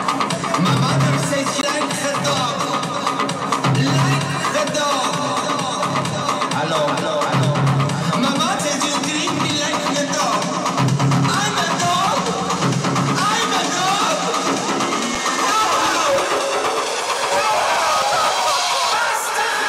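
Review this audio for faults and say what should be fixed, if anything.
CD skip at 1.61 s, 8.59 s and 18.02 s: the laser jumped to another turn of the spiral, so the audio mutes briefly, roughly 20 ms at first and a few milliseconds later, then resumes elsewhere. Underrun with held sample at 15.15 s: the output buffer ran dry for 5.33 ms, a gap of 256 samples. The waveform freezes flat at its last value, and about 5 ms of live audio is lost. To prevent both, isolate the disc player from knocks and clean the disc, and enlarge the output buffer so playback never runs empty.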